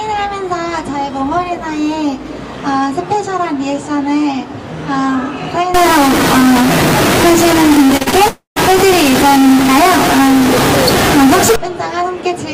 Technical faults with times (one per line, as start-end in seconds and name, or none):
5.74-11.56 stuck bit
7.87-8.14 repeated packet loss (robotic sound)
8.28-8.58 long network dropout